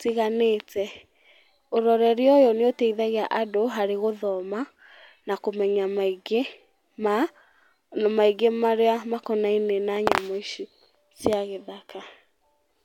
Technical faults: loud pop

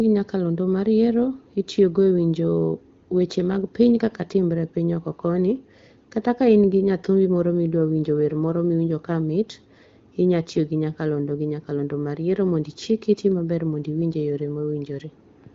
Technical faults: none

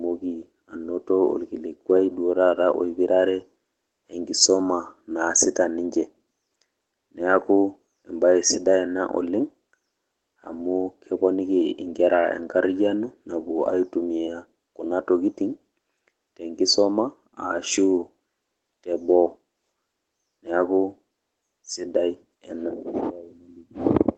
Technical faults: none

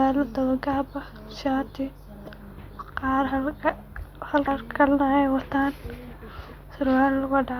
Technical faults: damaged data in a compressed stream

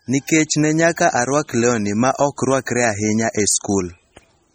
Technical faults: MP3 compression

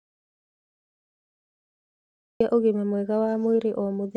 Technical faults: audio dropout to silence

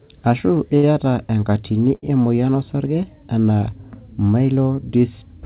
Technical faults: short stall from a late packet

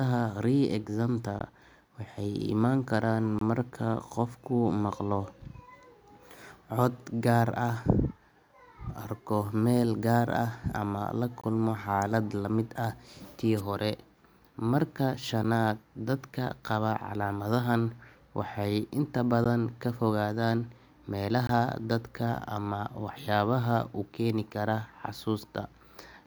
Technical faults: gap between stream segments; wireless microphone noise hit

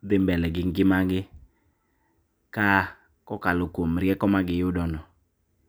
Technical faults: none

